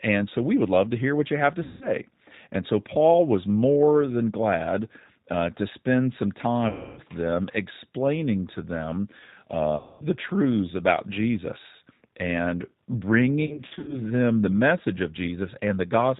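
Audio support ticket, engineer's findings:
Speech throughout sounds slightly rough and synthetic, band-limited with nothing above 4 kHz, plainly audible coding damage. Cause: G.729 codec (G.729A variant, 8 kbit/s). Speech is rebuilt from a vocal tract filter, pitch predictor and sparse pulse excitation per 10 ms frame, so fine detail is lost.

Buzzy or noisy, fading smears where the sound is stretched, with weak, distorted recovery afterward. Cause: VoIP packet loss concealed by the speech codec. The decoder extrapolated from its last pitch and filter with decaying gain.
1.63–1.89 s: fits about 180 ms of lost audio.
6.69–7.00 s, after "uh to spend some", before "them explaining to them": about 280 ms.
9.77–10.04 s, before "truths about": about 230 ms.
13.46–14.01 s, before "the message of": about 220 ms in short gaps of up to 50 ms spread over 420 ms.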